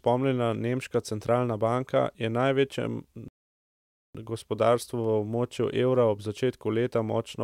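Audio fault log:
3.28–4.15 s, rebuffering stall: the player ran out of buffered audio and waited for more, so speech falls silent for 0.86 s, then resumes exactly where it stopped.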